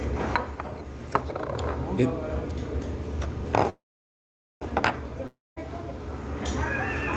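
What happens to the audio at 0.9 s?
Nothing goes wrong at 0.9 s: the sound passes through intact, carried by the call path's Opus coding at a low bitrate, which fits the top end stopping around 8 kHz.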